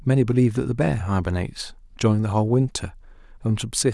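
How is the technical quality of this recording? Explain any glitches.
No glitches turn up here; the speech runs along steadily with nothing breaking in or getting in the way.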